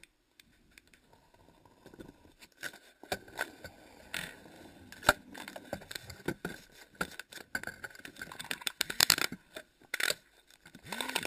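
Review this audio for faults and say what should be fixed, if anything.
Imaging from sample-and-hold upsampling runs through the whole clip. Each original sample was held and repeated with no smoothing filter, which fits raising a 12 kHz rate to 48 kHz. The spectrum therefore reappears mirrored above 6 kHz, with the first image spanning 6 to 12 kHz at about 8 dB below the signal, heard as a bright metallic fizz tracking the sound's loudness. A spectrogram shows a reflected copy above 6 kHz whose lowest band moves opposite to the real content, and the waveform looks stair-stepped. Upsample with a proper interpolation (anti-imaging low-pass) filter instead of sample repetition.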